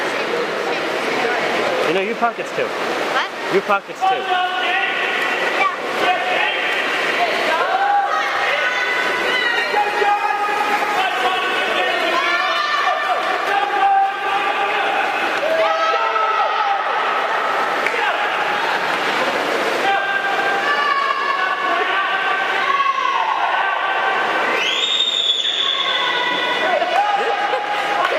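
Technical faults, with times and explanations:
9.09–19.15 s, call bitrate drop: the call's bandwidth estimate collapsed and the encoder was ordered to spend far fewer bits, consistent with a fall from around 128 kbps to roughly 20 kbps. With so little budget, Opus quantises the spectrum coarsely and gives up the top end, so the sound goes rough, watery and dull. It stays at its worst for about 5.2 s before the bitrate climbs back and clarity returns.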